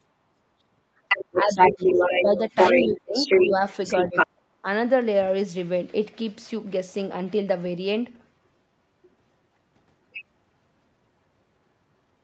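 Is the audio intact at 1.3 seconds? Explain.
No. The other side's voice is leaking through from 1.08 to 3.54 s, somewhat louder than the talker. This is likely residual echo: the far end's loudspeaker audio reached the microphone, and the echo canceller failed to remove it. From 1.33 to 3.64 s, the speech is also suppressed in double talk. With both sides talking, the canceller likely could not separate them and pulled the talker down by up to around 10 dB, in pieces adding up to about a second and a half.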